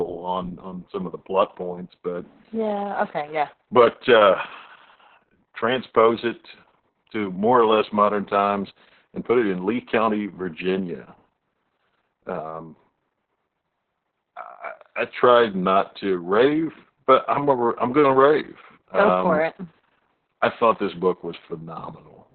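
Opus voice compression runs throughout the speech. The SILK coder confines it to narrowband, roughly below 4 kHz, and codes the excitation coarsely, which fits a bitrate around 6 kbps. The damage is heavy: muffled, hoarse and slightly robotic.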